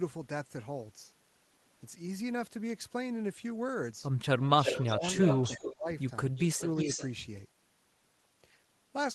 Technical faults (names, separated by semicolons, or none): echo leak; speech suppressed in double talk